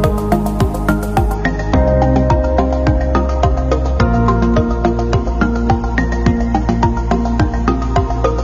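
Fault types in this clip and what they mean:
Adaptive stream at a lower bitrate: the player switched to a cheaper version of the stream when the connection slowed. At 1.34 s the quality changes abruptly, with no gap. From there to the end, nothing is heard above 7.5 kHz, so the top end sounds dull. Codec artefacts grow more noticeable. The change fits a fall from roughly 96 kbit/s to about 24 kbit/s AAC.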